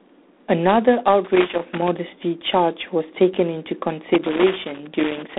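Throughout, the speech carries G.726 ADPCM coding damage: a harsh, rasping hiss that rises and falls with speech level, which points to the 24 kbit/s mode with too few bits per sample. A spectrogram shows energy only between 200 Hz and 3.6 kHz, empty above 3.8 kHz.

From 1.24 to 1.88 s, and again from 4.14 to 5.38 s, loose connector crackle appears. A worn contact rapidly makes and breaks, chopping the signal into scratchy bursts. The waveform shows jagged dropouts and sharp spikes; the spectrogram shows irregular broadband vertical streaks.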